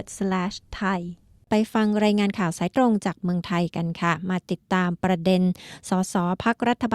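Nothing technically wrong turns up here, as the audio runs without any audible faults to point to.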